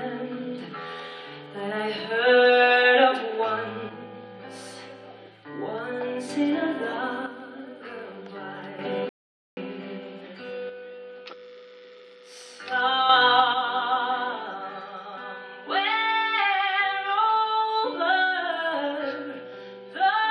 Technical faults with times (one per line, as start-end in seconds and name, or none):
3.89-6.29 one channel drops out
7.26-8.79 one channel drops out
9.09-9.57 rebuffering stall
10.69-13.09 one channel drops out
13.54-20.31 one channel drops out